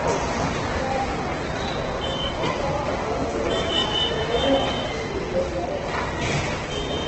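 Opus compression runs throughout this recording of everyday sounds: nothing survives above 8.2 kHz, and tones come out grainy, rough and noisy. The likely cause is Opus in its music mode at a very low bitrate, which fits about 12 kbps, filling starved bands with noise.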